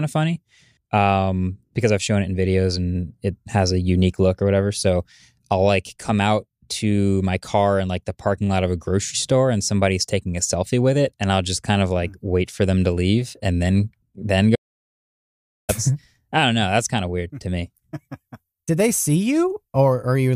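The input feed to the recorder was lost for a little over a second, most likely through a dropped connection or a momentary mute upstream, while writing carried on with silence. The result is an audio dropout to silence from 14.56 s to 15.69 s: the speech cuts off abruptly, about 1.13 s of silence follows with no room tone underneath, and the speech resumes mid-flow with whatever was said in that gap missing.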